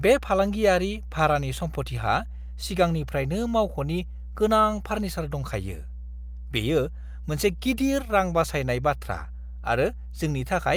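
From start to finish, mains hum runs under the speech: power-line interference, picked up through a ground loop or a nearby transformer, adds a steady 60 Hz tone about 10 dB below the speech. A spectrogram shows an unbroken horizontal line at 60 Hz.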